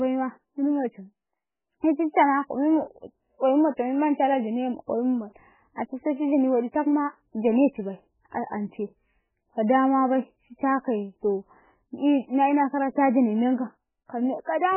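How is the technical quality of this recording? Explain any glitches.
The recording is heavily degraded throughout. From start to finish the speech is band-limited, with nothing above 3.1 kHz, and sounds watery and swirly, with smeared consonant attacks. The likely cause is heavy MP3 compression at a very low bitrate, around 8 kbps, where the encoder cuts the treble and switches weak frequency lines on and off between frames.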